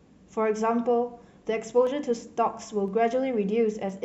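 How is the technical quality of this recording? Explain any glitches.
The speech is marred by a regular series of clicks from what sound like clock drift buffer slips. About four short ticks fall roughly every 1.01 s, from 0.86 s to 3.89 s. The likely cause is two devices whose clocks disagree by a couple of hundred parts per million, so the buffer between them creeps until a handful of samples is dropped or repeated. On a waveform each slip appears as a tiny discontinuity, and on a spectrogram as evenly spaced vertical lines.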